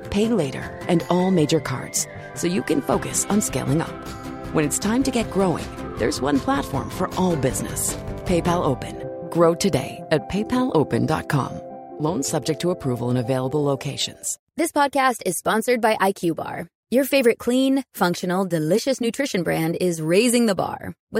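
Nothing stood out as a technical fault on listening.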